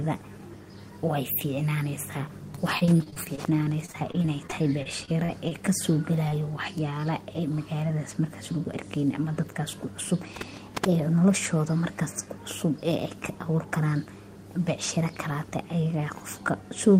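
From 2.55 to 5.52 s, repeated packet loss made the receiver patch 20 gaps of up to 29 ms, about 13% of the stretch, so the speech turns choppy and robotic. At 6.29 to 6.33 s, a short concealed packet loss was bridged by extending the preceding sound, leaving a brief smear. At 8.64 s, just after "magaladas marka", a block of digital silence about 7 ms long replaced the samples with zeros, heard as an abrupt tick. From 9.00 to 10.29 s, a jitter buffer speed-up trimmed pitch periods, about 70 ms in total, so the speech runs 5% faster at unchanged pitch and sounds slightly hurried.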